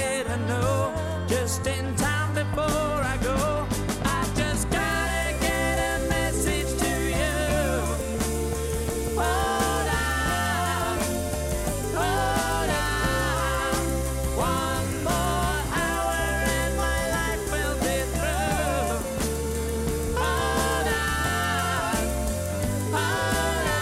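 No technical faults are audible anywhere in the recording.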